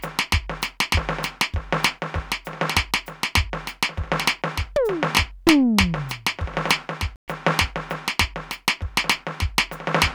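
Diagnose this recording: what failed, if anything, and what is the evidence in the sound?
A playback stall at the player stage: the music goes silent from 7.16 to 7.28 s, 120 ms, likely from data starvation or a blocked thread, unlike a brief dropout click.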